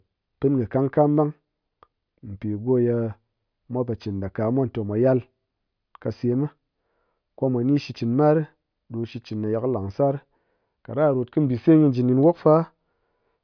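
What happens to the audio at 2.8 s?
Nothing goes wrong at 2.8 s; the speech carries on intact through that moment, with no dropout, click or distortion.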